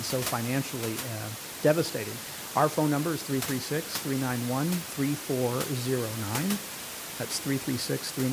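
The signal path shows no technical faults, and the only thing beneath the speech is the room's own background noise, sitting about 12 dB lower and belonging to the recording rather than to the system.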